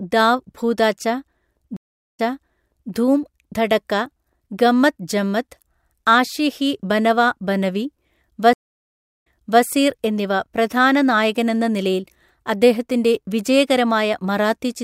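Speech with two stream reconnects. At 1.77 s the audio drops out for 407 ms, then resumes 744 ms earlier than where it stopped, replaying material through 2.92 s. At 8.53 s a 709 ms silence is followed by a jump back of 384 ms, settling by 9.63 s. In both cases the connection broke, the player rebuilt its decoder mid-stream, and the server resent a burst of buffered audio, so the restart fades in before the repeated section plays.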